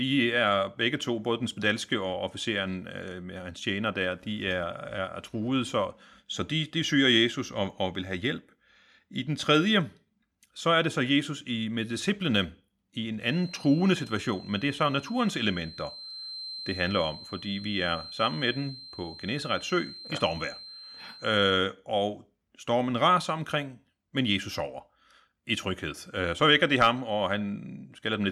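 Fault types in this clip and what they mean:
Feedback whistle: a thin, single-pitch 4.1 kHz whistle sits about 15 dB under the speech, likely from a loudspeaker-microphone loop held just short of runaway.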